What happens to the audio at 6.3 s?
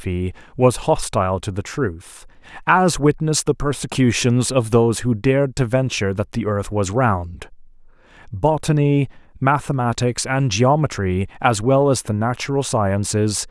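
Nothing goes wrong at 6.3 s; the speech there plays through intact, with no dropout, click, glitch or other fault.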